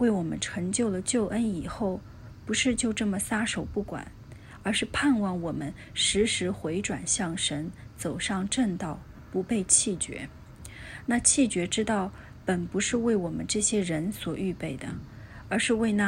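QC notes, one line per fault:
9.17 s, lost LE Audio frames: about 15 ms of audio went missing, which fits two lost LC3 frames. The decoder filled the gap by repeating the previous spectrum with randomised signs, so the sound briefly becomes a short, noisy smear.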